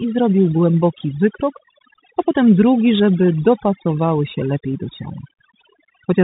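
Throughout the speech, overdone noise removal has pushed near-noise frequency bands to silence, leaving twinkling specks rather than the steady dulling of a simple low-pass filter. Also present from start to finish is the Bluetooth CVSD headset codec. Nothing passes above 3.8 kHz, s sounds turn scratchy, and a granular hiss sits under the voice, which fits CVSD's 64 kbps one-bit coding rather than ordinary telephone band-limiting.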